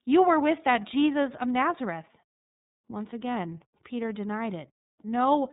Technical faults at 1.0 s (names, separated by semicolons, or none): iLBC codec